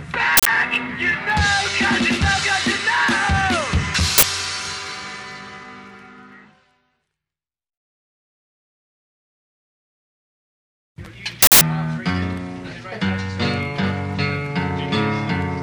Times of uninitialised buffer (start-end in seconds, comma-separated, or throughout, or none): 0.37-0.46, 4.18-4.23, 11.42-11.61